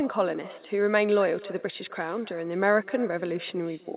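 A speech recording carrying echo with no canceller from start to finish: every phrase is followed, roughly a third of a second later, by a faint copy about 20 dB down, its return through the far-end loudspeaker and microphone. Unlike room reverb, the copy arrives as a distinct, delayed repeat rather than a smear, and it sits within a narrowband call path with nothing above 4 kHz, consistent with G.711.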